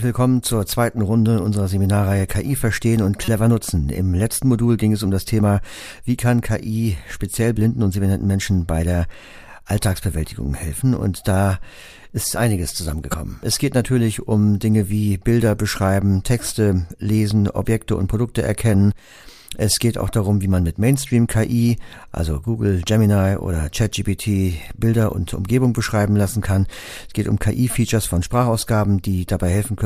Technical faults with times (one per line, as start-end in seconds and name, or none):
3.25-3.28 corrupt frame decoded
13.10-13.14 corrupt frame decoded